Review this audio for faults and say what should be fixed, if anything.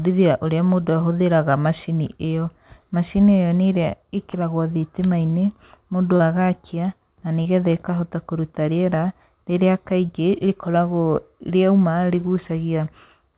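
Brief smears and wobbles break into the speech at 4.31 s (after "ĩyo nĩ ĩrĩa"), 6.16 s, 7.43 s (between "mũndũ agakia na nĩ" and "getha ĩkahota kũruta rĩera") and 10.06 s (after "ĩkahota kũruta rĩera rĩrĩa"). This is short concealed packet loss. Each time, about 30 ms of audio arrived too late, and the receiver covered the gap by extending the preceding sound for 22 to 35 ms before blending back into the real audio. At 10.06 s the repair also added a few milliseconds of delay. These drops can be prevented by giving the call's packets network priority, or by enabling forward error correction or a larger jitter buffer on the link.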